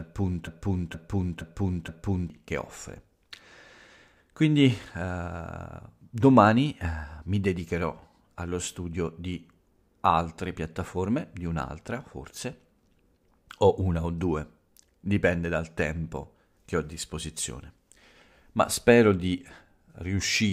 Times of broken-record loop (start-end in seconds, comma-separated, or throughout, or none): 0.00-2.30